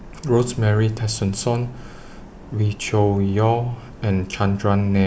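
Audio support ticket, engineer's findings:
No fault found in the audio; findings are clear for this ticket.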